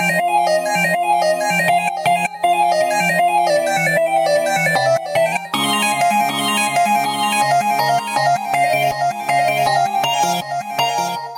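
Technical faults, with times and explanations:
Throughout: gain pumping. The level keeps ducking under every loud moment, with a swing of around 15 dB, so everything sounds squashed. That's likely the gain set far too hot and a fast limiter clamping down.
3.50 to 5.32 s: drift correction step. Playback slows by 5.8% and the pitch sags about 103 cents, roughly a semitone. Likely clock-matching software changing the rate in one jump to rebalance its buffer.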